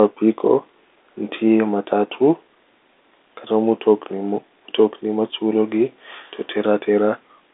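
No technical faults are audible.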